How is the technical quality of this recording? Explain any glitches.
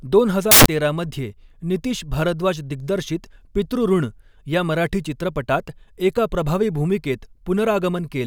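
There is one glitch. From 0.51 to 0.66 s, just before "तेरा मध्ये नितीश", samples built from the wrong bytes turn the speech into a burst of loud, harsh broadband noise, because misassembled byte order pushes the noisy low bits into the dominant part of each value.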